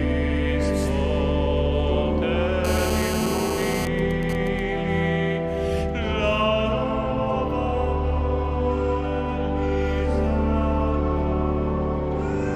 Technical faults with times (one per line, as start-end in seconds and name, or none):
2.65-3.86 GSM phone buzz
3.87-4.59 GSM signalling bursts